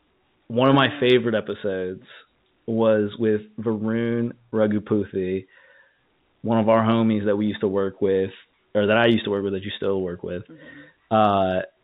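No technical faults occur in this speech, which is carried over a G.711 A-law telephone path at 64 kbps.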